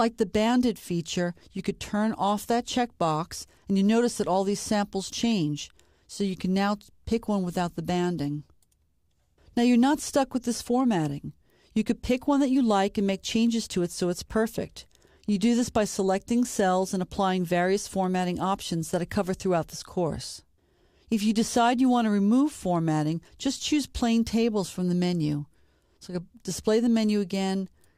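No faults can be heard anywhere in the recording.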